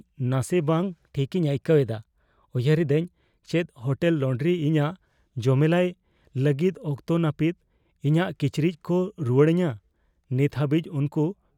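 From 0.83 to 3.12 s the speech runs about 5.7% fast and sits roughly 95 cents sharp, nearly a semitone, then snaps back to normal. This points to a drift correction step, likely clock-matching software abruptly changing the playback rate to rebalance its buffer.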